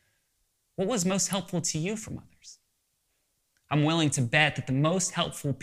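A speech recording with one sharp snap at 1.33 s, sitting on top of the talking and peaking around -20 dBFS. It sounds like an electrical switching spike, most likely a nearby switch, motor or static discharge arcing briefly and getting picked up on the audio line.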